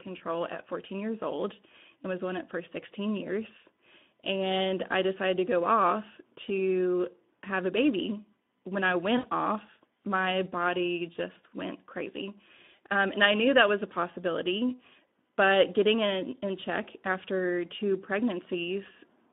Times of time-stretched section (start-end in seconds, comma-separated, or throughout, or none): none